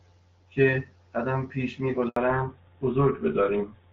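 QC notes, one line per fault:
2.08–2.16 s, handover gap: the speech cuts out abruptly, fading within a few tens of milliseconds, and there is 80 ms of dead silence before audio resumes. This is the signature of the call being handed from one network to another. No speech frames were delivered while the link switched over, so the receiver had nothing to decode and anything spoken in that window is simply gone rather than concealed or smeared.
2.16–3.93 s, fallback to narrowband: from the moment audio returns, all content above 4 kHz is missing, and the speech turns dull, boxy and rougher compared with the first two seconds. Before the gap the sound carries the airy upper band of AMR wideband HD Voice, with only light coding damage and clear speech consistent with its 12.65 kbit/s mode. After the handover, the codec has fallen back to a narrowband one, and the hard 4 kHz ceiling and rougher texture point to GSM full rate at 13 kbit/s.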